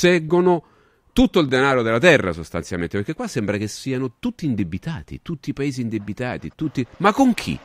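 At 1.49 s the speech jumps ahead by a millisecond or two, with no gap of silence. This is likely a dropped buffer (overrun): samples were overwritten before being read, and the remaining audio was butted together.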